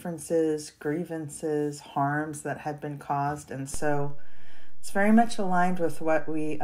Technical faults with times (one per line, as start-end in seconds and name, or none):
3.74-6.63 DC step